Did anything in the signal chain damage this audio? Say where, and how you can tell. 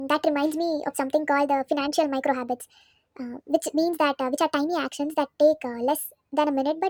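Yes. The damage is a wrong sample rate, introduced at playback. It runs from start to finish. The speech is too fast and too high. Everything moves 1.5 times quicker, and the pitch sits about 7 semitones up. Speed and pitch shift together by the same ratio, so nothing resampled the audio. The samples were simply clocked out faster than they were captured. A 1.5 ratio fits audio recorded at 32 kHz and played at 48 kHz.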